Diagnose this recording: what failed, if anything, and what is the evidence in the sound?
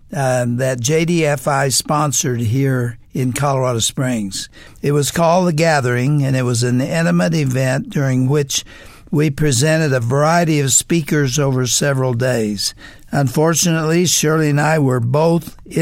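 Nothing in this recording points to a failure at any stage; the sound holds together all the way, with no break, glitch or damage to trace back to wiring, conversion, processing, network, storage or playback.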